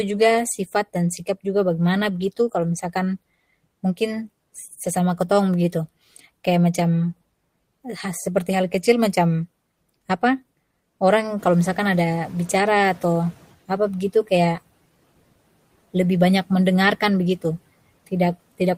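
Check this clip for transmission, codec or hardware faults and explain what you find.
One fault stands out. Noise suppressor catching up, from 11.37 to 13.46 s: the room noise jumps by about 10 dB around 11.5 s, and the suppressor's noise estimate lags behind. The noise first passes with less reduction, then sinks by about 10 dB over roughly 2.1 s as the estimate adapts. After the rise, the room noise itself sits about 24 dB below the speech.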